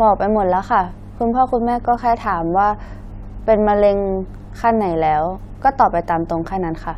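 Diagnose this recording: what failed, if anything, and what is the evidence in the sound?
The fault is mains hum, and it sits in the analogue wiring stage. A steady low tone at 50 Hz runs under the speech from start to finish, with some low harmonics above it. It sits roughly 25 dB below the speech. A ground loop or a nearby transformer has coupled the 50 Hz power line into the signal path before conversion. That is why the tone never changes.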